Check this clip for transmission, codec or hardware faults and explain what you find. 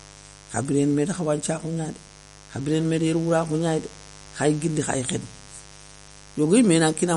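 Two faults run through the whole speech clip: a mains buzz and plainly audible lossy-codec damage.

The mains buzz is present from start to finish, roughly 25 dB below the speech. Something in the power or grounding path, such as a dimmer, a rectifier or an unshielded lead, is injecting sharp spikes twice per 50 Hz cycle. That stacks harmonics of 50 Hz high up the spectrum, so it sounds like a raspy buzz rather than a smooth hum. A pure hum would sit only at 50 Hz and its first few multiples and sound soft and round.

The second fault, also throughout, is plainly audible codec damage with nothing above 11.2 kHz. The sound is watery and swirly, with chirpy, metallic s sounds and smeared consonant attacks. This is likely MP3 compression at a low bitrate, around 48 kbps. With too few bits, the encoder cuts the treble at a fixed frequency and drops weak spectral detail that flickers in and out from frame to frame. 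A simple low-pass filter would also remove the top end, but it would not produce the swirling or the chirps.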